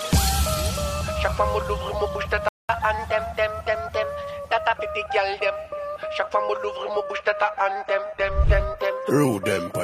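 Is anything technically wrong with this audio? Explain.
Yes. The audio has three separate faults: a playback stall, a catch-up at higher speed, and a drop to a lower bitrate in an adaptive stream.

From 2.49 to 2.69 s the output is a playback stall. The sound cuts off mid-flow and is silent for about 0.21 s, then resumes. The likely cause is the player running out of buffered data, or its playback thread being blocked, so nothing reached the output until it recovered.

From 2.69 to 4.77 s the player runs a catch-up at higher speed. It plays at 1.1 times normal speed by resampling, and because resampling moves pitch along with tempo, everything sounds sharp by roughly one and a half semitones. This wins back all of the time lost in the stall. At 4.77 s speed and pitch return to normal.

From 6.83 s to the end the adaptive stream switches to a lower bitrate. The change is sudden and has no gap. 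Coding artefacts become more obvious. The sound is consistent with a move from a 96 kbit/s AAC-LC stream to a 20 kbit/s HE-AAC one, where the upper band is rebuilt synthetically instead of being coded directly.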